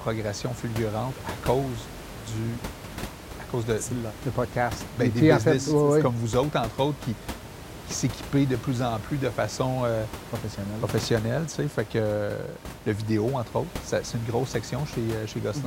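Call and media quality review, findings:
No system faults found in the speech path; the only steady background is ordinary room noise picked up at the microphone, sitting about 13 dB below the speech level.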